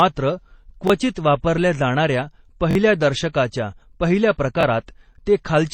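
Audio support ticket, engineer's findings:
Speech throughout is dull and band-limited, with nothing above 8.7 kHz and smeared, warbly transients layered over a swirly high-band texture. Likely transcoding between lossy codecs: the artefacts point to a low-rate MP3 pass re-encoded to HE-AAC, both around 32 kbit/s.

Repeated buffer: brief stutters at 0.88–0.90 s just before "वापरल्या जाणाऱ्या", 2.71–2.75 s (double repeat) before "दर्शकाच्या पहिल्या", and 4.61–4.63 s after it. Late data, so a roughly 21 ms block, which fits a 1024-sample buffer, replays with hard joins. About 20–40 ms of audio is lost.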